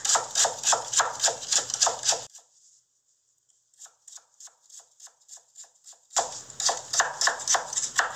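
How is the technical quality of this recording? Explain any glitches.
The recording has one clear fault: a deep drop in level in the middle of the clip.

From 2.27 to 6.17 s the sound falls by about 25 dB and turns faint. The likely cause is one channel inverted: with one stereo channel's polarity reversed, the content shared by both channels cancels when they are summed to mono, leaving only their small differences. On a waveform the envelope shrinks sharply across that span, and a spectrogram shows the energy dimmed across the frequency range.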